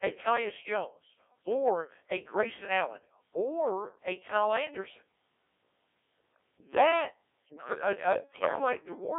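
From start to finish the speech has the robotic, buzzy character of the Codec 2 vocoder, and the damage is heavy. The decoder never gets the real waveform. It gets only pitch, voicing, energy and a rough spectral envelope, then rebuilds the voice from sine waves. The coarseness points to a very low rate, around 1.3 kbit/s. Everything sits inside a narrow radio-style band of about 300 Hz to 3.5 kHz, so it sounds thin as well as synthetic.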